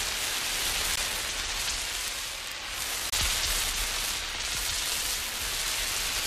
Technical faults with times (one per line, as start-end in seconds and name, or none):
0.96-0.99 damaged data in a compressed stream
3.08-3.13 damaged data in a compressed stream